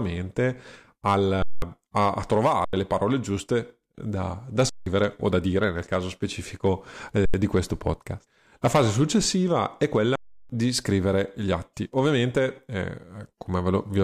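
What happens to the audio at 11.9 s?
Nothing goes wrong at 11.9 s: the speech there plays through intact, with no dropout, click or distortion.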